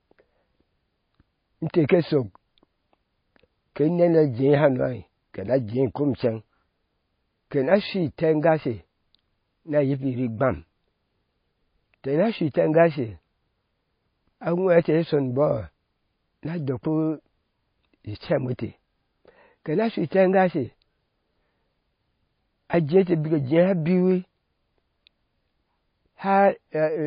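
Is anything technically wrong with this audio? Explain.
Yes. Heavy MP3 compression at a low bitrate is the likely cause, cutting everything above 5.1 kHz and dropping weak detail throughout, so the speech sounds dull, watery and swirly.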